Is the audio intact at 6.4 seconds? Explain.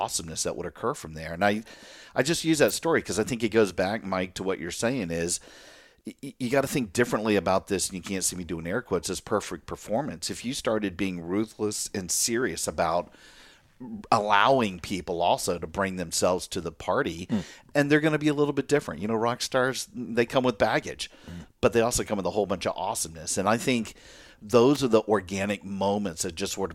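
Yes, at 6.4 seconds the speech plays through cleanly, with no dropout, click, distortion or other fault at that moment.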